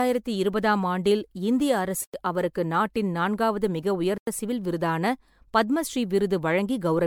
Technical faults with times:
0.00-7.06 generation loss
2.04-2.14 block of digital silence
4.18-4.27 block of digital silence

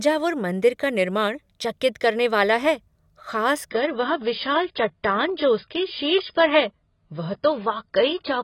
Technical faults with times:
3.70-8.44 adaptive stream at a lower bitrate

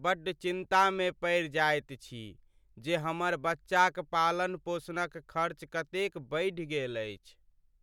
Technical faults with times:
none

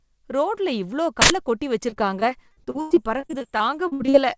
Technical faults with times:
1.22-1.30 uninitialised buffer
1.90-4.15 repeated packet loss (robotic sound)

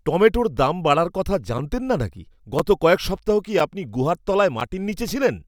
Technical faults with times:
0.57 gap between chunks
1.58 gap between chunks
2.59 gap between chunks
3.60 gap between chunks
4.60 gap between chunks

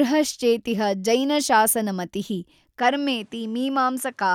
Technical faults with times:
2.79-4.35 input switched to a poorer device

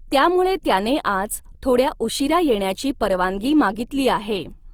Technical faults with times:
0.00-4.74 Opus compression

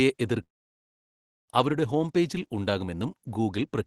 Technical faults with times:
0.43-1.50 long network dropout

